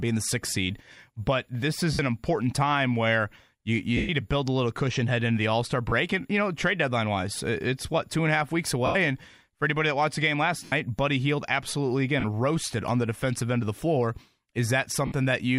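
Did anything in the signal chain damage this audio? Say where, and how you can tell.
Yes: lost LE Audio frames on the Bluetooth link, at 1.93 s (after "sixth seed but this", 60 ms), 3.97 s (after "time where you you", 120 ms), 5.89 s (30 ms), 8.86 s (90 ms), 10.65 s (70 ms), 12.2 s (40 ms, just before "roasted on the defensive") and 15.06 s (60 ms). In each gap the LC3 decoder repeats the last spectrum with scrambled signs, so the speech turns into a noisy smear that fades toward silence on the longer losses.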